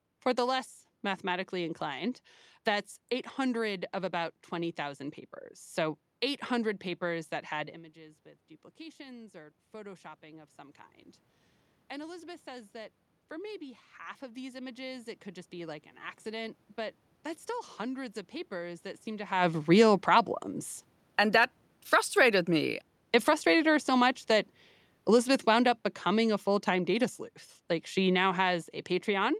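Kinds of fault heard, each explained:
Automatic gain rising: Just after "papers that had", around 7.9 s, the talker drops off the mic by about 17 dB, probably by leaning back, and the AGC decides the input is too quiet. It slowly pushes its gain up by about 13 dB, all the way to about 19.3 s. You hear the voice and the room noise swell together, and since the talker moved itself isn't a system fault, the giveaway is that slow shared rise.
Automatic gain falling: At about 19.7 s the talker comes back toward the mic, but the AGC is still holding the extra gain it built up, so the voice suddenly arrives too hot. The AGC then backs its gain off gradually. From there to the end of the clip the sound starts loud and sinks, with the background noise sinking right along with it, which marks it as gain riding, not the speaker getting softer.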